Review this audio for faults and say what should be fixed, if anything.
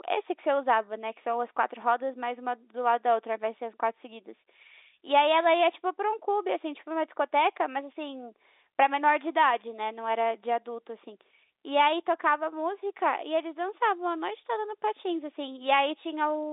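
A phantom power thump occurs at 1.82 to 1.99 s. A supply switched on a live input pushes a voltage step through the coupling capacitors, giving a deep thud that dies within 38 ms. Unlike a plosive pop, it has no breath burst. Mute the channel before switching phantom power.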